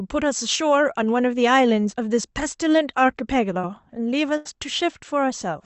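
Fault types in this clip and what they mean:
Short concealed packet loss, 3.61 to 3.65 s: about 20 ms of the call arrived too late for the decoder. The receiver patched roughly 16 ms of it by extending the preceding speech, carrying its pitch forward if voiced or substituting shaped noise if not, then crossfaded back into the real signal. Here it comes across as a brief smear or wobble lasting only a few hundredths of a second.
Burst of packet loss, 4.37 to 4.47 s: about 80 ms of consecutive audio was lost or came too late to play. The receiver bridged the whole gap with about 80 ms of concealment, continuing the last sound while steadily turning it down. The result is a tenth-of-a-second stretch of held buzz or fading hiss, after which the speech picks up further along with that portion missing.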